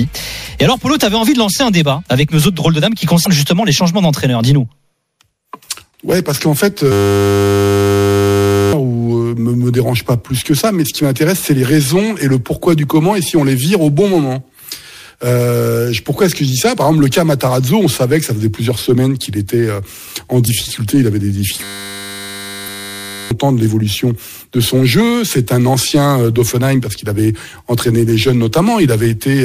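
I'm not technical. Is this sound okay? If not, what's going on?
No. Parts of the compressed file got corrupted (damaged data in a compressed stream), so the player briefly lost its place, causing short glitches at 3.23–3.27, 16.73–16.78, 20.44–20.49 and 22.64–22.68 seconds.

The computer also froze twice while the sound hardware kept replaying the same tiny 10-millisecond scrap (a system hang loop). That makes a steady 100 Hz buzz from 6.92 to 8.73 seconds and from 21.64 to 23.31 seconds. Roughly two seconds of sound are lost in the first freeze and about one and a half in the second.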